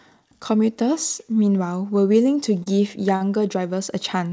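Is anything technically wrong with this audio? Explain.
Yes. Two short stalls from a late packet occur, at 2.63 to 2.68 s and at 3.16 to 3.22 s. Each time, a packet arrived late and the jitter buffer ran dry, so the receiver held the last bit of sound, for 29 ms and then 42 ms, until the data came in, then carried on from the same point. The sound briefly hangs with a faint buzz or dip. Unlike a packet-loss dropout, nothing is skipped. Everything after each stall simply arrives that much later. The call path's G.722 coding at 64 kbps leaves nothing above 8 kHz.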